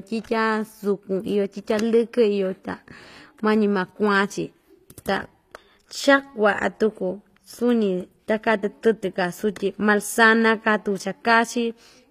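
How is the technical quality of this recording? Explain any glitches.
The recording has one fault that runs for its whole length: plainly audible codec damage, most likely from HE-AAC compression at a low bitrate, which fits about 24 kbps. From start to finish, nothing survives above 14.9 kHz. The lower spectrum is coded directly, but the treble is rebuilt by spectral band replication, which copies lower bands upward under a coarse envelope. Because those copied harmonics don't line up with the real ones across the crossover, s sounds and other bright consonants carry synthetic, mismatched treble. On a spectrogram, the top band would show a hard ceiling at 14.9 kHz, with repeated, smeared copies of lower-band patterns above the crossover. The waveform would show little.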